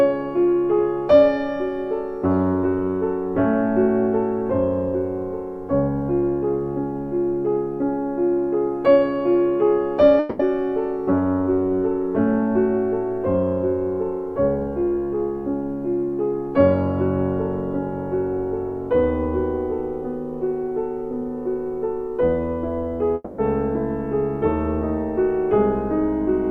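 A long network dropout is the likely cause of two gaps: packets stopped arriving for about 200 ms from 10.19 to 10.40 s and about 240 ms from 23.14 to 23.39 s. Each time the receiver stretched the last sound into a fading buzzy tail that covered nearly the whole gap, with roughly 10 ms of silence at the end of the second. The audio then resumes, with that stretch of material simply gone.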